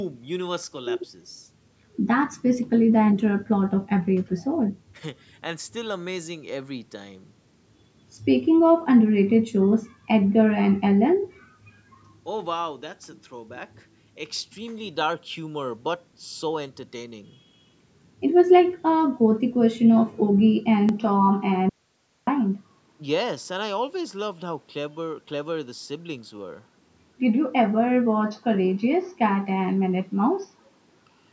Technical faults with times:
20.89-31.32 input switched to a poorer device
21.69-22.27 audio dropout to a faint residue

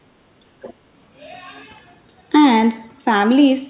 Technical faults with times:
0.62-0.74 other side's voice leaking through

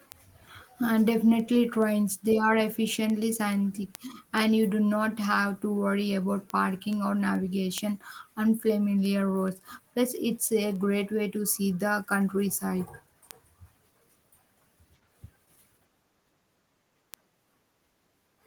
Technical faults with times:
0.12-18.41 word clock ticks

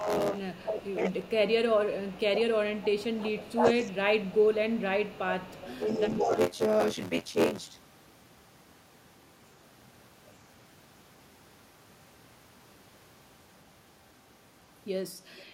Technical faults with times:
0.00-15.53 buffer tearing
0.00-2.48 speech suppressed in double talk
0.40-0.92 echo leak
2.75-3.10 echo leak
3.16-6.34 speech suppressed in double talk
5.40-5.80 echo leak
6.17-6.23 echo leak
15.38-15.43 echo leak

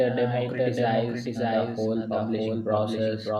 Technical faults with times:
0.00-3.39 doubled audio track

